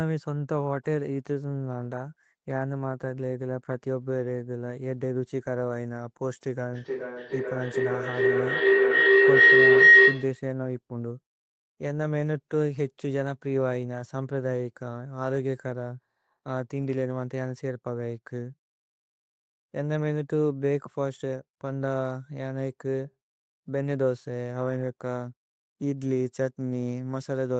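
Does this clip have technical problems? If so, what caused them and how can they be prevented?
Yes. From 6.73 to 10.5 s there is feedback howl. A loop between two devices in the room gains on each pass, so a tone near 2 kHz builds, pulsing roughly every 400 ms and peaking about 13 dB above the speech. Unlike echo, it grows rather than fading. Headphones, or muting one device, would prevent it.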